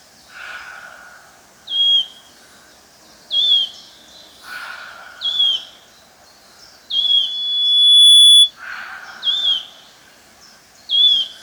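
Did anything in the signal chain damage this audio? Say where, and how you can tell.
Yes. From 6.98 s to 8.51 s a piercing tone near 3.4 kHz swells over about a second until it sits roughly 10 dB above the sound. This is loudspeaker feedback squeal: the microphone picked up its own loudspeaker, and loop gain above unity at that frequency made it run away.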